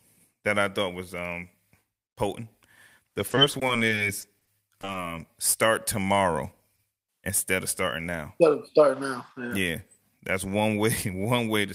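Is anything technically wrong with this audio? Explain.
Yes, there are two network-related problems in this speech clip.

From 3.27 to 4.96 s there's repeated packet loss, giving that robotic sound. Over a dozen short holes hit the stream, none longer than about 20 ms, adding up to about 180 ms of missing audio. The receiver papers over each one by extending the last bit of sound, and about 15% of that stretch ends up as patched filler. With the holes coming this close together the speech turns choppy, with small pieces dropped out.

Then, from 6.76 to 6.80 s, there's a single short concealed packet loss, where about 20 ms of audio never arrived in time. The decoder bridges that gap by continuing the preceding sound, carrying the pitch forward if it was voiced or filling with shaped noise if it wasn't, then fades back into the real signal. You hear it as a quick smear or tiny wobble, and a brief consonant at that spot could go missing.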